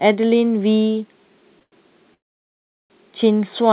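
At 1.59 to 1.62 s and again at 1.63 to 1.73 s, a packet arrived late and the jitter buffer ran dry, causing a short stall from a late packet. The receiver held the last sound for about 18 ms, then about 91 ms, adding a slight buzzy smear before resuming with nothing lost.

From 2.14 to 2.91 s, packets were likely held up in transit, emptying the buffer and causing a call audio freeze. The held sound decays quickly into roughly three quarters of a second of silence, then the speech picks up where it stopped, with the 4 kHz-limited call bandwidth unchanged.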